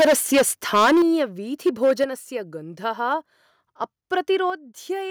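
From 0.0 to 1.22 s the speech has a harsh, crackling edge. This is microphone overload. The input was likely set too high, so the peaks ran about 15 dB past the converter's limit and had their tops cut flat. Roughly a fifth of the samples are clipped. At 1.02 s the level drops suddenly by about 8 dB, voice and background together. This is a microphone volume stepped down, likely the call software cutting the device's input gain after the distortion.

The overload returns from 1.66 to 2.04 s. It is milder, about 5 dB over, with around a tenth of samples flattened. At 2.04 s the level steps down again, by about 5 dB. Brief crackles follow at 3.11 to 3.14 s, just touching the limit, and at 4.13 to 4.19 s, about 2 dB over. Only a small share of samples clip in each. At 4.5 s a third drop of about 7 dB follows.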